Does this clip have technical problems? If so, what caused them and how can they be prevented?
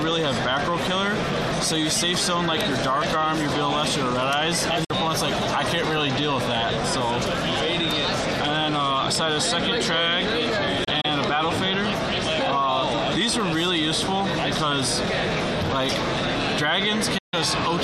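Yes, digital broadcast dropouts: the receiver muted with quick 8 ms fades when frames failed, at 4.84 s (48 ms), at 10.84 to 11.05 s (48 ms lost in scattered holes, none over 24 ms) and at 17.18 to 17.34 s (144 ms). Clean fades to silence, rather than clicks or repeated fragments, mark receiver muting instead of packet-loss concealment. A stronger, steadier signal at the receiver prevents this.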